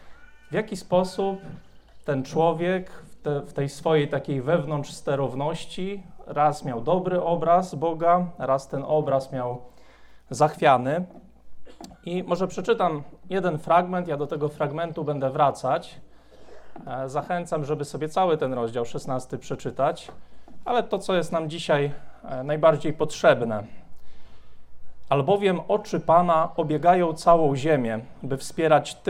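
No technical faults are audible.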